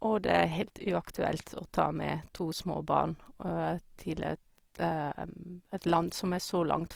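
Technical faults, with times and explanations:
Throughout, Opus compression: the encoder, likely Opus in its CELT music mode at a rate that fits about 24 kbps, runs short of bits and fills bands by folding lower ones or with noise. The speech turns plainly rough and grainy, while the band still reaches 20.4 kHz.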